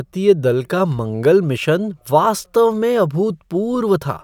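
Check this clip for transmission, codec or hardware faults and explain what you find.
The speech signal shows no transmission, codec or hardware fault at any point, with an unbroken waveform throughout.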